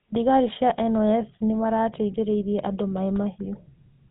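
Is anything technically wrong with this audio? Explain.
Yes. Throughout, the speech carries GSM full-rate codec damage. A vocal-tract model excited by coarse pulse trains gives a buzzy, gravelly roughness, consistent with a 13 kbps coder. The spectrogram shows nothing above 3.8 kHz.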